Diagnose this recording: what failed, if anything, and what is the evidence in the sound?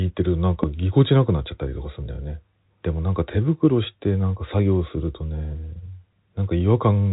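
A single loud pop at 0.63 to 0.66 s spikes well above the speech, which carries on underneath. It's likely a voltage transient in the analogue wiring, such as a plug or switch.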